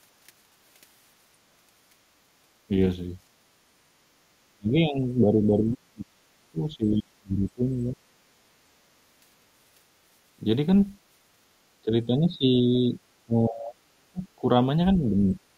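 A speech recording with two echo-canceller faults. At 3.65 to 3.75 s the background is gated by the echo canceller: for about 100 ms the room tone drops by about 8 dB and then returns, showing as a thin pale vertical band across the noise floor on a spectrogram and a small notch in the waveform's low-level hiss. The larger problem is speech suppressed in double talk, most likely because the canceller mistook the talker for loudspeaker echo while the far side was speaking and attenuated both. The voice is pulled down at 4.46 to 8.02 s by roughly 40 dB at its deepest, at 11.85 to 12.99 s by around 10 dB, at 13.26 to 14.46 s by roughly 35 dB, and at 14.96 to 15.38 s by only about 5 dB. The waveform envelope collapses or shrinks through these spans, and the spectrogram shows the harmonics fading and breaking into patches, with the deep spans nearly blank.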